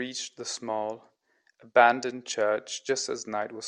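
Nothing stood out as a technical fault on listening to this speech recording.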